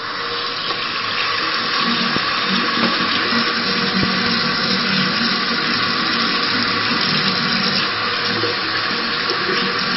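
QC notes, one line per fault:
Throughout: likely MP3 compression at a very low bitrate, roughly 24 kbps. The top stops dead at 5.6 kHz, and heavy damage makes weak detail flicker frame to frame into a watery swirl. That swirl, not the dull top alone, separates it from plain low-pass filtering.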